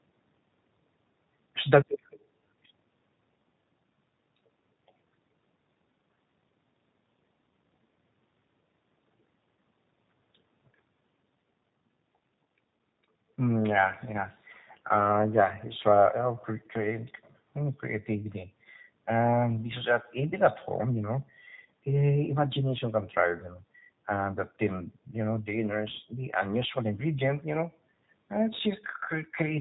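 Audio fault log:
Throughout: G.729 codec. The speech is rebuilt rather than carried, from a vocal tract filter, a pitch estimate and a few pulses in each 10 ms frame, so the voice sounds plainly rough and synthetic and nothing reaches above 4 kHz, a sound that fits G.729A at about 8 kbit/s. Plain band-limiting would only muffle the sound. Here the texture itself is coarse, and the narrowing does not come from the call's microphone processing, which only takes out the lowest bass.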